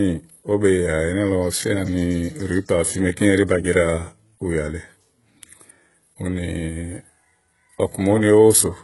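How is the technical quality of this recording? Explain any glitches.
The recording carries heavy codec damage for its whole length. The sound is likely from HE-AAC compression at a very low bitrate, around 12 kbps. Throughout, the speech has a synthetic, metallic treble, and s sounds come out gritty or lispy. Nothing reaches above about 11.5 kHz. The codec spends its few bits on the lower spectrum and regenerates the top by copying lower bands upward under a coarse envelope, so the rebuilt harmonics fail to align with the real ones.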